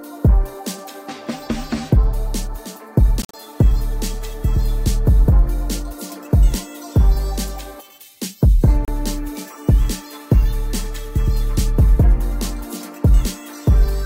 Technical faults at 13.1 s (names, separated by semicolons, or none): none